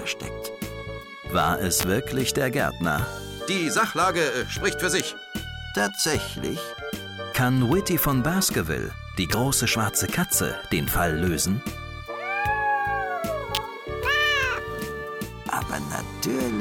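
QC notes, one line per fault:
1.80–1.83 s, 5.00 s, 9.32 s, 13.55–13.57 s: electrical switching spike. Each is a sharp snap or tight click cluster lasting between 1 and 32 milliseconds, laid over the sound. The first is the strongest, and the others sit somewhat lower. This is likely arcing from a nearby switch or motor coupling into the line.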